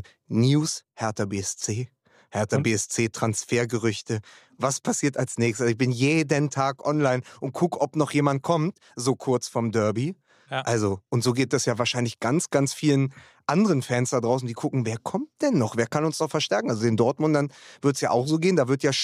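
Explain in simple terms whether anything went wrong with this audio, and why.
Nothing stood out as wrong when listening to this speech recording.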